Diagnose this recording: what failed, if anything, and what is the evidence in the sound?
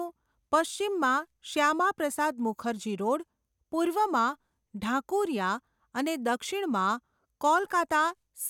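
Nothing failed; there is no evidence in the sound of a fault at any stage of the recording.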